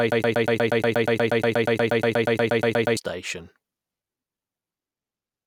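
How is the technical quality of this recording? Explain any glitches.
The playback or stream most likely stalled and kept re-sending the last short fragment it held, producing a broken-record loop that is already running when the speech clip begins. From 0.0 s to 2.97 s, one piece about 0.12 s long repeats exactly, back to back, 24 times, giving a rapid mechanical stutter in place of continuous speech. Whatever speech should have played during those three seconds is missing, and normal audio resumes only after the loop ends.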